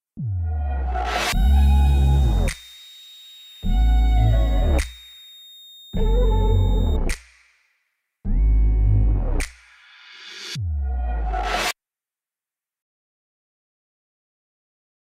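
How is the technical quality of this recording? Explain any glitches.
The recording has one fault, a switching supply whistle. It runs from 1.14 s to 6.97 s. A high tone sits under the audio, wandering between about 3.68 kHz and 3.80 kHz. It is roughly 25 dB below the signal. The cause is a switching power supply. It either cycles in an audible burst mode or beats against another supply. Changes in load move its pitch within that narrow band.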